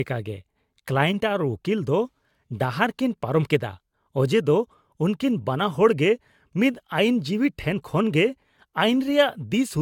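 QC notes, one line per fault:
Throughout, generation loss: the speech sounds swirly, hollow and smeared, with blurred onsets and nothing above 17 kHz, which fits AAC-LC at around 96 kbit/s. The likely cause is about five encode passes, each requantising on a shifted frame grid so noise and spectral holes accumulate.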